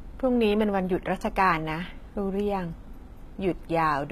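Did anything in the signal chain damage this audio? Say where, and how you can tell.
Yes. The damage sits at the codec stage and runs through the whole speech clip. Its likely cause is HE-AAC compression at a low bitrate, around 20 kbps. Sibilants come out gritty and metallic because the treble has been rebuilt by spectral band replication, which copies lower bands upward instead of coding the originals. On a spectrogram the upper band shows repeated, blocky patterns whose harmonics don't line up with those below the crossover, and nothing appears above about 14.9 kHz.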